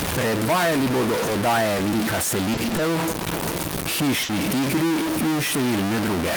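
It's a speech clip, and right through it there's a distorted edge on the voice, with the pauses filled with a noise floor instead of going quiet. That's most likely a stuck bit, one data bit pinned at 0 or 1 so about half the samples land off by that bit's weight, with the error also flipping around zero in the quiet bits. At 2.53 to 2.60 s there's a short stall from a late packet: the sound just hangs for about 40 ms with a faint buzz or dip while the jitter buffer sat empty, then carries on exactly where it left off, so nothing's actually lost. At 4.23 to 4.32 s, just before "tigri in", it's a burst of packet loss: the receiver stretched the last sound for roughly 60 ms, fading it down, then jumped ahead, so about 60 ms of speech is simply gone.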